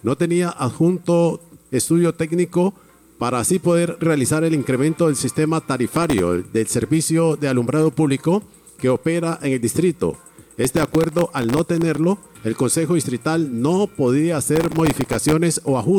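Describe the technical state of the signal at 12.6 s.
Around 12.6 s the signal is intact, with no audible dropout, distortion, glitch or other technical fault at that point.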